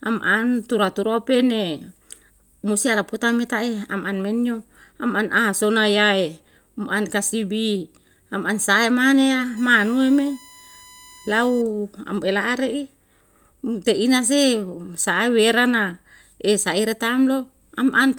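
USB whine from 9.57 to 11.62 s: a steady 1 kHz tone, some 25 dB under the speech, produced by the bus's 1 ms frame current leaking into power or ground.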